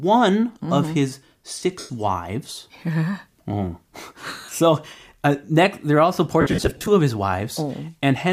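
The speech briefly smears into noisy hash at 1.79–1.90 s, in short scattered patches at 4.41–4.53 s, and across 6.41–6.88 s. These are lost LE Audio frames: the decoder refilled each gap by repeating the last spectrum with randomised phase, which fades over longer gaps.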